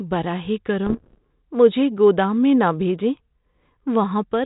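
From 0.86 to 1.18 s, just before "مجھے گودام میں نہ", bit errors on an ADPCM link cause pops and rough bursts with brief level jumps. Each flipped bit, at around one percent, derails the decoder's step size and predictor, so damage rings on for milliseconds. The waveform shows jagged spikes, and the spectrogram shows broadband vertical streaks under the 4 kHz ceiling of the G.726 path.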